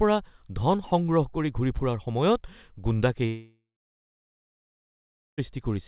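From 3.26 s to 5.5 s the speech drops out in a way that points to a long network dropout, likely a stretch of a little over two seconds in which no packets reached the receiver. To cover the gap, the receiver stretches the last sound into a fading buzz that dies after a few tenths of a second, leaving near-silence for roughly 1.7 s. The speech then resumes with the lost portion simply gone, still band-limited to 4 kHz by the call path.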